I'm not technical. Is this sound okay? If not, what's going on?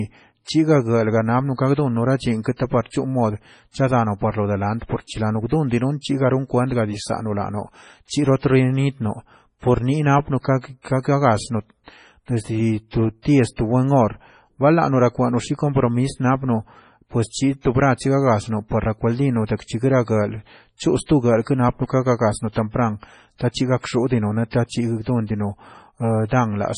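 No. The speech sounds watery and swirly throughout, with s sounds turning metallic and nothing above 10.5 kHz, so it is dull and lacks crispness. That is MP3 compression, likely squeezed hard: the encoder dropped the treble and quieter details that flicker in and out.

There is also pre-echo at 13.56 to 13.58 seconds, right after "desdi to", and at 22.52 to 22.56 seconds, after "chosto grap kenapaka gagasno". A brief hiss arrives just ahead of a sharp sound, which then lands soft. The compression spread its noise backwards into the quiet moment before it.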